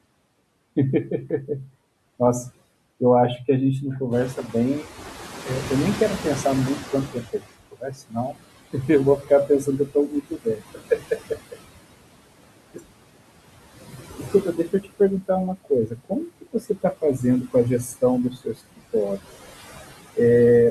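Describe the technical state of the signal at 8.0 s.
At 8.0 s the speech is being cut by the noise suppressor, within a span from 7.08 to 8.36 s. The suppressor misreads quiet parts of the speech as background and turns them down with the room noise, by about 19 dB at the deepest, so around half a second in total sounds swallowed or faint.

Noise suppressor artifacts are present here too. The suppressor lowers bands it judges to be steady noise by about 20 dB, frame by frame, so the remaining room noise (which has been about 14 dB below the speech since it rose near 4 s) sinks between the words and rises under them.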